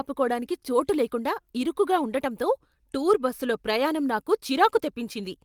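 No technical faults can be heard at any point in the recording.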